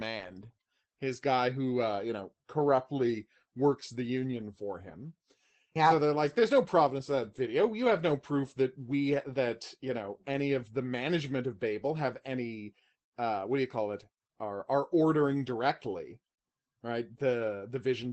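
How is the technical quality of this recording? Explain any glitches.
Technical quality is limited by one fault running through the whole clip: Opus voice compression, plainly audible from start to finish. The speech sounds muffled, hoarse and faintly robotic, which fits a low bitrate of around 12 kbps in Opus's SILK speech mode. SILK models the voice as a predicted spectral envelope plus a coarsely coded excitation, so at this rate the fine detail and breathiness are lost. On a spectrogram, nothing appears above 8.5 kHz, leaving a flat ceiling, and the harmonic bands below it look smeared rather than crisp.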